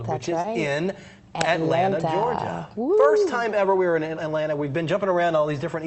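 Short concealed packet loss at 0.41 to 0.46 s: about 20 ms of audio arrived too late, so the receiver extended the preceding sound before blending back, leaving a brief smear. The call path's codec limits the audio to about 8 kHz.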